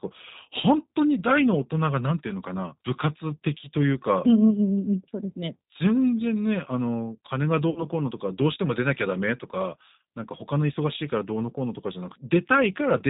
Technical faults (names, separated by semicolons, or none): G.729 codec; VoIP packet loss concealed by the speech codec